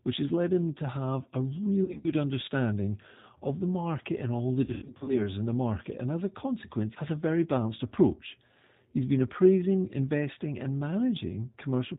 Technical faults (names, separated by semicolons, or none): G.729 codec; VoIP packet loss concealed by the speech codec